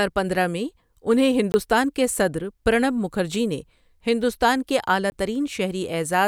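Brief holes mark two blocks of digital silence, at 1.52 to 1.54 s and 5.10 to 5.12 s. Each time, a 20 ms block of zeros was played, and the signal drops out and returns with no fade.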